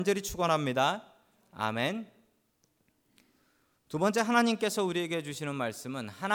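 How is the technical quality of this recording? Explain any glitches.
No technical glitches can be heard in this speech recording. There is nothing here that needs explaining.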